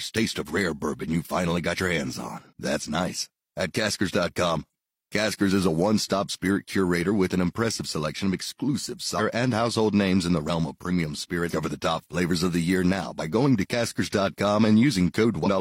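At 2.47 to 2.53 s, 4.69 to 4.73 s, 9.15 to 9.21 s, 11.47 to 11.53 s and 15.42 to 15.48 s, damaged data in the compressed stream makes the decoder misread frames and hunt for the next header, leaving brief disruptions of 36 to 64 ms. Unlike an isolated electrical click, each one comes from the decoder losing frame sync.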